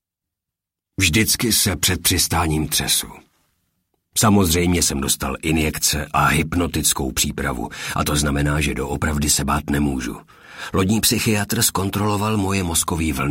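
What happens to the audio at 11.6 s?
Nothing goes wrong at 11.6 s; the audio runs on intact through that moment with no fault to be heard.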